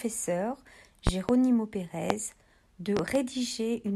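Loud pops hit the speech at 1.07 to 1.33 s (a pair), 2.10 to 2.14 s (single) and 2.97 to 3.19 s (another pair), peaking roughly 15 to 20 dB above the signal. Each is a sharp thump over continuing speech, likely a voltage pulse from a switch, plug or static.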